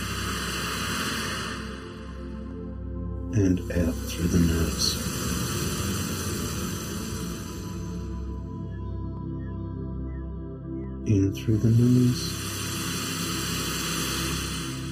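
From the very start there's channel delay causing comb filtering: one side is trailing the other by somewhere under a millisecond, and when the two fold down to mono the shared content cancels at evenly spaced frequencies. The first notch lands somewhere around 700 Hz, with more stacked above it, so the whole thing has that hollow, phasey colour that never moves, because the notches stay fixed for the full length.

Then from about 0.84 s through to about 14.17 s you get a regular click, roughly ten of them, ticking along every 1.67 s like clockwork while there's signal. That steady spacing is the giveaway for clock drift buffer slips. Likely two devices on separate clocks, off from each other by something in the region of a couple of hundred parts per million, so the buffer between them creeps until a small block of samples gets dropped or repeated. The size of each jump points to only a handful of samples, around fifteen, which is why it reads as a click rather than a gap.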